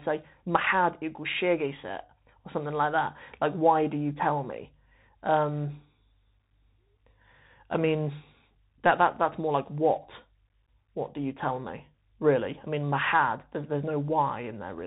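From start to finish the speech passes through a Bluetooth CVSD headset codec, plainly audible: nothing reaches above 4 kHz, s sounds turn scratchy, and a granular hiss sits underneath. The one-bit delta coding is what sets it apart from plain telephone band-limiting. Loud bright sounds outrun its adaptive step.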